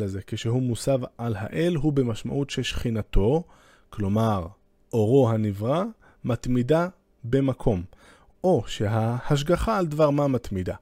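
No faults are audible anywhere in this speech recording.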